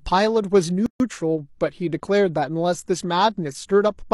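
At 0.86 s the speech drops into a silent gap of about 139 ms, ending at 1.0 s. This is a gap at a join of encoded pieces. Separately encoded sections were butted together untrimmed, leaving start delay and end padding. The edges are smeared, and the speech resumes where it stopped.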